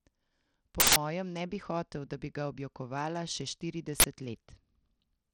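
Speech, encoded throughout with what is likely Bluetooth SBC compression at a low bit pool, consistent with roughly 80 kbps, leaves the treble thin and flickering and the sound gritty. Twice an uninitialised buffer reached the output before audio was written to it, producing loud bursts of digital noise: from 0.80 to 0.96 s, just before "ne bi hotel da", and from 4.00 to 4.04 s, right after "bi ga objokovala še".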